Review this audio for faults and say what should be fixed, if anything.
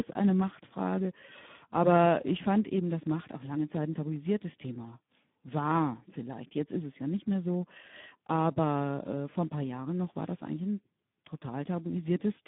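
The speech is hoarse, buzzy and noisy from start to finish, with a thin, boxed-in tone limited to roughly 150 Hz to 3.6 kHz and nothing above 3.8 kHz. This is heavy Speex codec damage. The CELP coder has too few bits to model the excitation, so the voicing turns rough. The sound points to a low setting of around 8 kbps in narrowband mode. To prevent it, encode at a higher Speex quality in wideband mode, or use a modern codec such as Opus.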